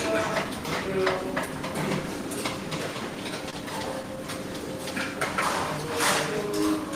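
At 3.50 s there is a short stall from a late packet, lasting until about 3.55 s. A packet arrived after its playout time, so the jitter buffer ran dry. The receiver held the last bit of sound for about 27 ms while it waited. When the packet came in, playback picked up from the same point. Nothing is lost. The sound just hangs briefly, with a slight buzz or dip, and everything after it runs 27 ms later.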